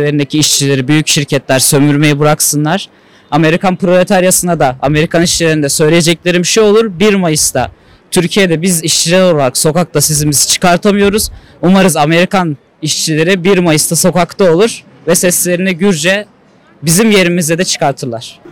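Hard clipping runs through the whole clip: the signal is pushed roughly 13 dB past what the stage can pass, so peaks are sheared flat, around 7 percent of samples. Those flattened tops throw off high harmonics, heard as a harsh fuzz on every loud sound.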